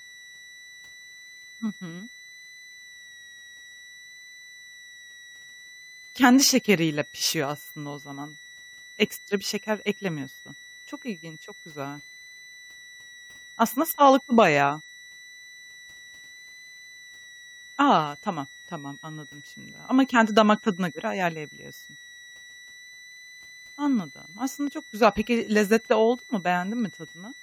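A switching supply whistle sits under the speech for the whole clip. It is a thin high tone drifting between 1.92 and 2.00 kHz, roughly 25 dB below the voice. A switching power supply running in an audible burst mode or beating with another one is producing it.

At 25.03–25.05 s, right after "aslında çok", a corrupt frame is decoded. Flipped bits in what sounds like a single compressed frame were played as-is, misplacing energy across the spectrum. The result is a short glitch peaking near -10 dBFS.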